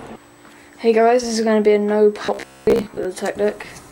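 From 2.25 to 3.05 s the sound turns into robotic sound from repeated short buffers: a rigid, metallic buzz locked at about 66.8 Hz that only loosely follows the material underneath. The likely cause is new audio arriving too slowly, so the playback keeps looping the last chunk of roughly 15 ms, which sets that fixed buzz pitch. Most of the real audio in that stretch gets skipped and replaced by the repeats.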